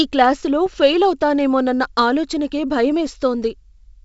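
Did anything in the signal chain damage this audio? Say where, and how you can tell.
Yes. Bit errors on an ADPCM link, in the codec stage: pops and a rough burst with brief level jumps from 0.66 to 0.74 s, just before "ఫెయిల్ అవుతానేమోనన్న ఆలోచనకే". Unlike packet loss, nothing drops out. A few flipped bits, fitting about two corrupted frames, upset the decoder's step size and predictor, so the damage rings on. The G.722 wideband coding itself sounds clean.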